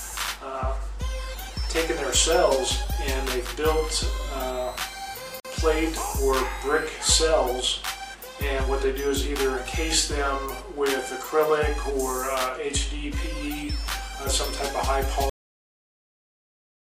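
A gap at a join of encoded pieces opens at 5.40 s and lasts about 48 ms, until 5.45 s. The audio was encoded in separate sections and then spliced without trimming. Each encoder pass leaves a short run of leading silence and pads out its final frame, and both are kept at the seam. Continuous sound drops briefly to nothing, with edges that the codec smears, then resumes exactly where it left off.

A cut-off end occurs at 15.30 s. The closing buffers were never written out or played back, so the sound stops mid-event instead of decaying. It falls straight to digital silence with no tail, and that silence fills the remainder of the clip.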